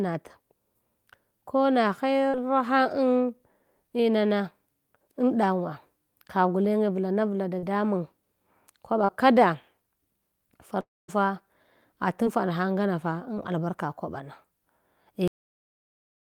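At 2.29 s, 7.59 s and 9.04 s, short concealed packet loss causes brief smears in the speech. Each time about 40 ms of audio arrived too late. The decoder continued the previous sound and then blended back into the real signal.

From 10.80 to 11.10 s there is a gap of about 280 ms. A fading continuation of the last sound is followed by roughly 220 ms of near silence. Speech then resumes with that section missing, likely a long network dropout.

At 12.24 s and 13.34 s, two smaller concealed losses of about 20 ms each leave wobbles.

At 15.28 s the audio is a cut-off end. Speech stops mid-sound and drops straight to digital silence with no decay. The final buffers were never written.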